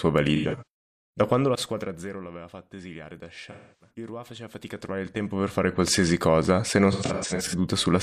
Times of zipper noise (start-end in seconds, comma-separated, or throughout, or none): 1.16-2.28, 4.37-5.80